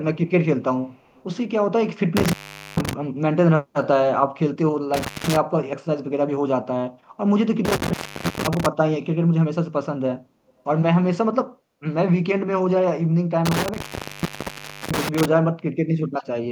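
From 0.92 to 1.24 s, and briefly again at 10.47 to 10.53 s, a very faint copy of the speech trails it by a fixed 246 ms. This is likely an echo leak from a far-end loudspeaker. Unlike room reverberation, it is a distinct delayed repeat rather than a smooth decay.

Intermittent contact cuts the sound at 2.17 s, 4.94 s, 7.65 s and 13.46 s. The line stays open for about 0.44 s, 0.18 s, 0.45 s and 1.1 s. Crackle marks each edge and faint hiss fills each gap, which separates these cuts from clean digital dropouts.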